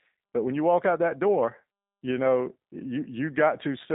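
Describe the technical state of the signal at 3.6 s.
G.729 codec coding is present at 3.6 s, as it is across the whole clip. The speech is rebuilt from a vocal-tract filter, a pitch predictor and a few pulses per short frame instead of the original waveform, which fits an 8 kbit/s G.729A coder. The band runs from about 200 Hz to 3.7 kHz with nothing above 3.8 kHz, so the speech sounds muffled, slightly rough and plainly synthetic.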